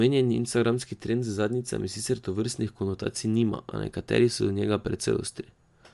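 Throughout, the speech cuts off above 11.6 kHz and the upper detail sounds grainy, likely Bluetooth LC3 compression, which fits a 48 kbps stream.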